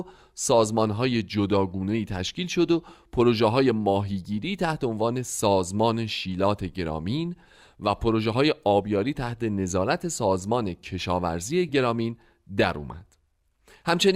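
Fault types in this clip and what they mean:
No faults detected in this audio.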